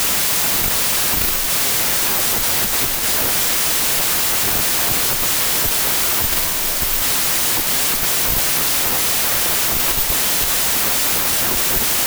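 Loud hiss-like noise runs through the whole clip, with slowed, lowered speech buried inside at two-thirds speed: a wrong sample width, consistent with packed 24-bit samples read as 16-bit.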